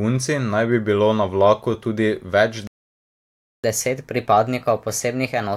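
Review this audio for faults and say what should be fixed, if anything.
A playback stall cuts the speech off at 2.67 s, right after "na vlaku tudi več", and leaves silence for about 0.97 s until 3.64 s. The output most likely ran dry because the player's buffer emptied or its audio thread was blocked. Unlike a recording dropout, which loses material, the speech resumes where it stopped with nothing missing, and a sped-up stretch follows. A larger playback buffer and a high-priority audio thread that nothing can block would prevent this.

Catch-up at higher speed runs from 3.64 s to the end of the clip. The player works through its backlog by resampling at 1.15 times normal speed, so the speech is both faster and roughly two semitones higher. A plain pitch or formant shift would leave the tempo unchanged, but here speed and pitch rise together, right after the silence. Catching up with time-stretching that keeps the pitch, or simply accepting the added delay, would avoid the chipmunk effect.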